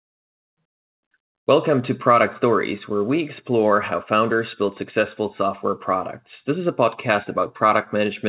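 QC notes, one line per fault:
No faults found; the speech is band-limited with nothing above 4 kHz, which fits a telephone-grade G.711 mu-law call path working as intended.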